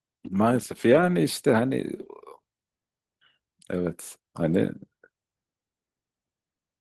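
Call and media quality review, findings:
Lost packets rebuilt from error correction, 0.93–1.03 s and 2.01–2.07 s: brief rough, noisy patches with no gap. Opus decoder playing low-bitrate copies from following packets, consistent with three and two lost 20 ms frames.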